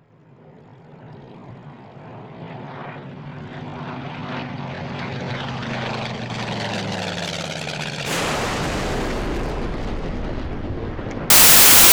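Wrong sample width from 11.30 s to the end at 11.92 s turns this recording of sounds into harsh, loud noise with the original barely audible inside it. The data were written as 16-bit integers but read as packed 24-bit ones, so each value is assembled from three bytes that straddle two real samples, and only some keep the true signal's top bits. Yielding 1.5 times fewer samples per stretch of data also makes what survives play 1.5 times faster and higher.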